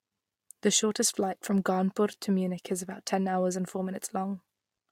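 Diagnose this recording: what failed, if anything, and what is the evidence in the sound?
No faults detected in this recording.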